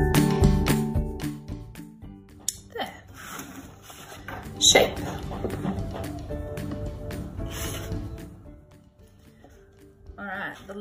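Zipper noise shows up three times. From 0.65 to 1.49 s the level drops roughly 15 dB in 2 dB steps, at about ten per second, each step a small tick. It comes back from 4.09 to 4.64 s on a rise of about 15 dB in 3 dB jumps, then again from 7.99 to 8.82 s on a fall of around 20 dB. There's no smoothing anywhere, so you get that zipping.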